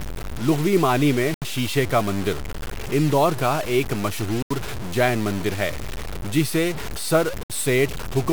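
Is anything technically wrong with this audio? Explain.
Yes, there are two problems.

Low bit depth without dither runs through the whole clip. The speech sounds grainy and gritty, with distortion that tracks the voice, sits only about 15 dB below it, and roughens the quiet syllables most. This fits likely truncation to around 5 bits with no dither, so the rounding error stays tied to the signal.

Bluetooth stall occurs three times, as short dropouts to silence: 1.34 to 1.42 s (78 ms), just before "شیشے کا مندر اندور"; 4.42 to 4.51 s (82 ms), between "مندر اندور کا ایک" and "جین مندر ہے"; and 7.43 to 7.50 s (68 ms). Each is likely a wireless link delaying packets until the headphone buffer ran empty, after which playback resumes.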